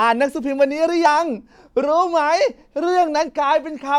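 Speech with two spots where compressed frames were skipped, at 1.05 s and around 3.28 to 3.30 s. Each time roughly one frame, about 20 ms of audio (fitting a 23.2 ms frame), drops out, so the talking lurches forward.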